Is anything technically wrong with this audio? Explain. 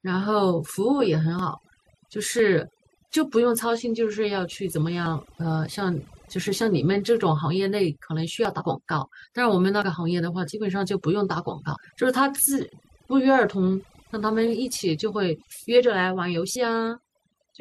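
Yes. The speech has three kinds of technical fault.

Overdone noise removal runs throughout. Bands sitting near the estimated noise floor are pushed almost to nothing, taking the quieter parts of the voice with them. The result is a lowered background dotted with twinkling specks. A spectrogram shows scattered isolated blobs and holes in place of a smooth noise floor.

Dropped buffers (overrun) occur at 1.39, 2.39, 8.45, 9.82 and 16.56 s. Each is a jump forward in the sound with no gap of silence. The likely cause is samples being overwritten before they were read, losing about 20 ms each time and nearer 70 ms at 16.56 s. The waveform shows an abrupt discontinuity, and the spectrogram shows a thin vertical line.

Compressed frames were skipped at 8.57–8.62 s and 11.73–11.77 s. About two 46.4 ms frames go missing each time, so the speech leaps ahead by roughly 100 ms.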